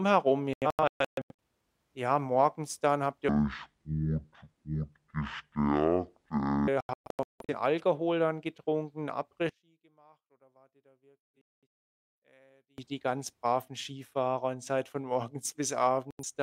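From 0.53 to 1.41 s there's a digital broadcast dropout: the receiver muted on bad frames, leaving scattered holes totalling about 0.55 s (longest 128 ms) before "ja morgens dann habt". From 3.29 to 6.68 s comes a section at the wrong speed, playing at 0.52x and roughly ten semitones lower, likely from a wrong clock. Dropouts return at 6.81 to 7.55 s (about 0.51 s lost, longest 171 ms) and 11.32 to 11.66 s (longest 213 ms). After "dann getrunken", from 9.49 to 12.78 s, the level drops about 33 dB, likely from one channel inverted cancelling in mono, until "die ganz braven". A final 85 ms dropout hits at 16.11 s, right after "seid von morgens bis".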